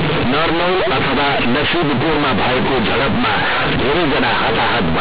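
Companded audio read as linear runs from the very start to the end of this speech. The A-law bytes are being played back as plain 8-bit linear samples without expansion, so every sign change throws the output across roughly half its range and soft passages come out as large as loud ones. The result is harsh, buzzy distortion at very high level, with heavy noise in the pauses, all sitting inside the 4 kHz telephone band of the 8,000-sample-per-second G.711 coding.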